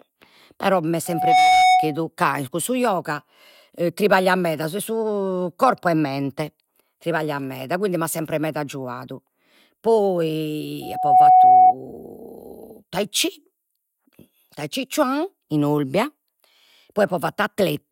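Loudspeaker feedback squeal at 1.06–2.00 s and again at 10.82–11.75 s: the microphone picks up its own loudspeaker, and the loop gain passes one at 739 Hz. A steady tone swells over a fraction of a second to around 10 dB above the speech.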